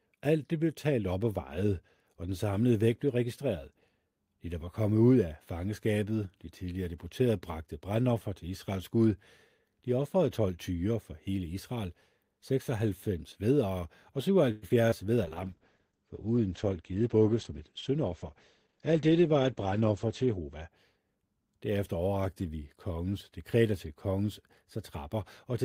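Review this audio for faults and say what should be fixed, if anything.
Call audio freeze, 14.51 to 14.65 s: for about 112 ms the speech stops moving forward and the last sound is drawn out and fades. The likely cause is packets held up in transit, leaving the jitter buffer with nothing to play, so the receiver stretched what it already had. Nothing is lost. When the packets arrive the speech resumes where it paused, and the call now runs about 112 ms later than before. To prevent it, keep the jitter buffer's target depth high enough to ride out the delay spikes on this network path.

Short concealed packet loss, at 14.69 s and 14.90 s: each leaves a brief smear lasting a few hundredths of a second. Around 20 ms of audio never reached the decoder in time at each point. The receiver covered the hole by carrying the previous sound forward, following its pitch where it was voiced and using shaped noise where it was not, then blended back into the real signal. 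Any very short consonant at those points can disappear. To prevent it, enable Opus in-band FEC or a small amount of redundancy so that single lost packets can be rebuilt.

Call bitrate drop, 15.25 to 20.77 s: the sound turns rough and muffled. The sender's bandwidth estimate fell, and the encoder was cut from 32 kbps to 10 kbps, staying at the lowest rate for about 5.2 s. At that rate Opus quantises more coarsely and narrows the audio band from 20 kHz to 8 kHz, so the upper frequencies disappear until the rate climbs back. To prevent it, tune congestion control so it does not overreact to a brief delay spike, and set a higher floor on the encoder bitrate.

Jitter buffer speed-up, 16.63 to 17.99 s: the speech runs at about 109% of normal speed while keeping its pitch, so it sounds hurried. The buffer held more than its target, as happens when delayed packets arrive together. The receiver drained the excess by cutting out short pitch-period pieces many times in a row, removing about 150 ms in total. 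To prevent it, let the buffer shrink back to its target more gradually, spreading the removals over a longer span.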